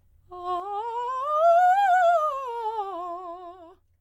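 Music in which one channel drops out from 0.60 s to the end: the level falls abruptly by about 6 dB, a sharp step down across waveform and spectrogram, likely from a lost stereo channel.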